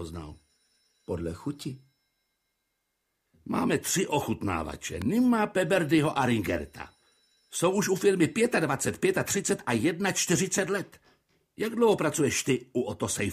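Sharp snaps sit on top of the sound at 5.02 s and 11.92 s, the second softer: electrical switching spikes, likely from a nearby switch arcing.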